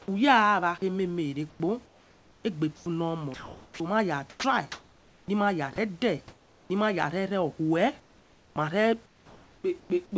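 From 1.50 to 3.80 s and again from 4.30 to 5.78 s, the speech is chopped by the voice detector. About 1.24 s and 0.72 s of sound become synthetic noise, likely from a detector toggling on and off. Unlike packet loss, the gaps hold steady hiss, not silence or smeared repeats. From 8.00 to 9.90 s, comfort noise replaces the background for about 1.24 s, likely sent during a pause. The room tone turns flat and featureless, over a band that stops at 8 kHz.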